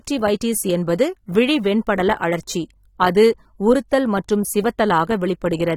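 From start to finish the speech carries plainly audible AAC compression, likely from AAC-LC at a low rate, with a degree of damage that fits roughly 32 kbps. Sibilants and held vowels take on a fizzy, warbling texture and sound smeared, and nothing survives above 19.4 kHz. Unlike simple low-pass filtering, which only dulls the top, this damage moves and churns inside the remaining band as the coder reallocates bits frame by frame.

At 3.89 to 3.92 s a brief hiss runs ahead of a sharp onset. This is pre-echo, about 30 ms of smear. The attack arrived late in a transform block, so quantisation noise sized for the loud attack was spread back into the quiet moment before it, and the attack itself lands soft. A click or dropout sits on or after the event, while this noise comes before the attack it belongs to.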